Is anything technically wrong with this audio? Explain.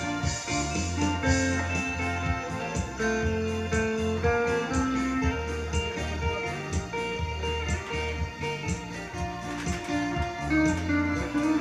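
No, nothing here sounds technically wrong, and it's fine to carry on with it as it is.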